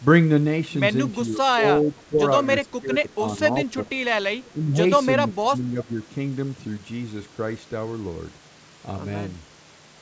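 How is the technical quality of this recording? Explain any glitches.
The recording is speech carried over a call, and it has audible faults in its first six seconds: repeated dips in the voice and one brief echo. Everything above 8 kHz is missing, which matches a G.722 call path at 64 kbps.

Speech suppressed in double talk occurs at 1.25–1.63 s, 1.81–2.23 s, 2.67–3.41 s, 3.65–3.99 s, 4.51–4.79 s and 5.27–5.89 s. The likely cause is both sides talking at once. The echo canceller could not tell the near talker from loudspeaker echo, so it turned the whole signal down. The voice sinks by roughly 10 to 15 dB in patches of a few hundred milliseconds, fading and recovering within each span.

An echo leak appears at 4.44–4.50 s. A faint delayed copy of the voice, about 30 dB below the speech, arrives roughly 374 ms late. This is likely sound from the far end's loudspeaker that its echo canceller failed to remove before sending it back. 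It is a short, quiet ghost of earlier speech, heard just before the next suppression dip begins.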